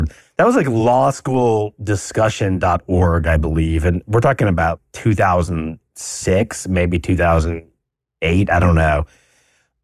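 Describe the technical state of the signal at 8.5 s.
At 8.5 s the signal is intact, with no audible fault at that point.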